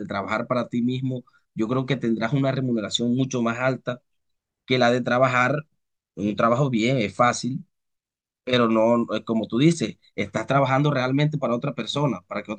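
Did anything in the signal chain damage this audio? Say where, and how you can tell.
No, nothing in the signal chain damaged this speech.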